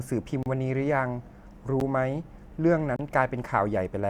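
Blocks of digital silence cut the speech at 0.43–0.46 s (32 ms), 1.80 s (10 ms) and 2.96–2.99 s (30 ms). The sound cuts out abruptly, likely from an unfilled output buffer, leaving short holes, with the 10 ms gap heard as a tick or dip.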